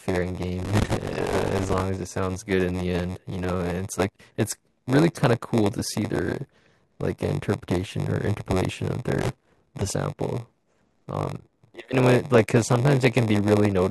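From start to end, a block size mismatch (padded) puts a zero gap in every block. It buzzes at 93.8 Hz, fitting a 512-sample read block. The speech runs at 0.938 speed, timbre unchanged.

From 0.61 to 1.84 s, and again from 9.18 to 9.61 s, processor overload crackle appears. Tiny buffers of around 1.5 ms miss their deadlines repeatedly. Each holds stale audio with hard edges, giving gritty tearing.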